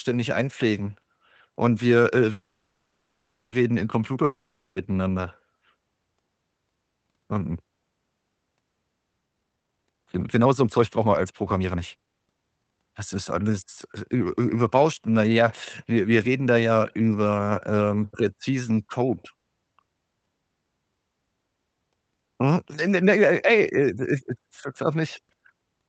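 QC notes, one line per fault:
2.31–3.54 s, call audio freeze: Right after "einpflegen und wir äh" the last sound is stretched into a fading buzz for 1.21 s, ending in about 0.26 s of silence. This is likely delayed packets emptying the jitter buffer. The speech then resumes where it stopped, so nothing is lost.
4.24–4.78 s, long network dropout: About 0.52 s of speech never plays. The last sound is extended as a decaying buzz, briefly reaching silence for about 30 ms, then audio returns further on. This is likely a stretch of lost packets, leaving a skip in the speech.
9.26–12.78 s, jitter buffer speed-up: Speech runs at 134% speed with unchanged pitch and sounds hurried. After a backlog built up, the receiver repeatedly cut short pitch-period pieces, removing about a second in total to bring the delay back to target.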